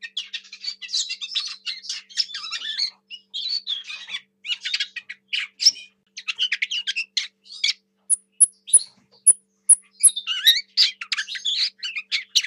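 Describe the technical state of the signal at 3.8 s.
At 3.8 s the signal is intact, with no dropout, clipping, glitch or other fault audible at that moment.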